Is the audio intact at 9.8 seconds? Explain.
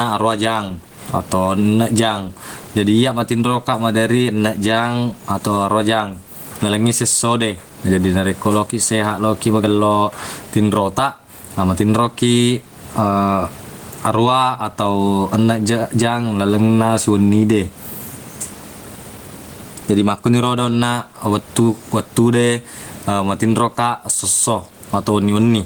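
No, gain pumping runs throughout, including 9.8 s: the gain is pulled down around 20 dB on loud speech, squashing loud and soft parts closer in level, likely from excessive gain hitting a fast limiter, not a gate cutting silence.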